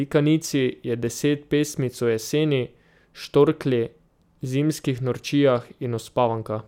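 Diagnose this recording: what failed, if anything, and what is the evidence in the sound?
Nothing in the speech signal points to a failure at any stage of the chain, from capture and conversion through to storage and playback, so there is no fault to diagnose here.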